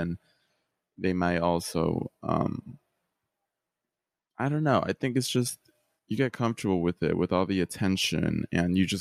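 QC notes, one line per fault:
No faults heard.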